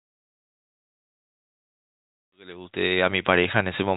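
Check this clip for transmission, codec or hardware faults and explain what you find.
No faults can be heard in this clip.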